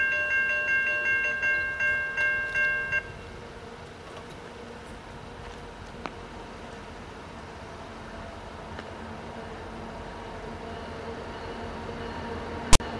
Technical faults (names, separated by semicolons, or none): file tags played as audio